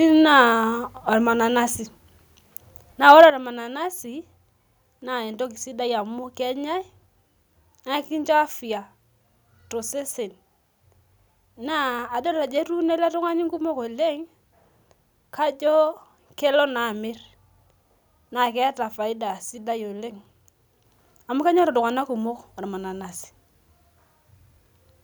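From 3.08 to 3.25 s the speech has a microphone overload. The loudest stretch gets a harsh, crackly edge, with the peaks flattened against the top of the converter's range. It pushes roughly 2 dB past full scale, and only a few percent of the samples in that window actually hit the ceiling, so it's a short gritty burst and not a sustained smear. The likely cause is the mic input gain set too hot for that moment.

Right after, at 3.3 s, the microphone volume steps down. Everything drops by about 8 dB in one go, the speech and the background together, with no fade. That instant drop straight after the distorted peak is what gives it away. It most likely comes from the call software noticing the clipping and pulling the device's input level down in a single step.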